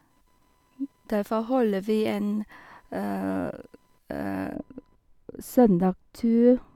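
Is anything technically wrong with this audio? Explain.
Yes, there are two faults.

Computer activity noise runs throughout: a faint buzz pulsing at about 1 kHz, roughly 45 dB below the speech, as the computer's changing load disturbs the shared audio ground.

From 4.55 s to the end, de-emphasis is applied wrongly. An unneeded treble cut of about 11 dB at 10 kHz relative to 1 kHz makes the speech audibly dull and muffled.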